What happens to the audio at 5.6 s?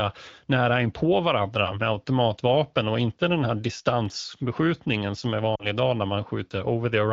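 At 5.56 s the speech hits lost AMR speech frames, running to about 5.68 s. Radio errors broke the frames' checksums. The AMR wideband decoder then had no valid data. It kept repeating the last good pitch and vocal tract settings while lowering the gain. The gap is about 40 ms, which fits two lost 20 ms frames. So the sound smears briefly and dips. Then the speech returns.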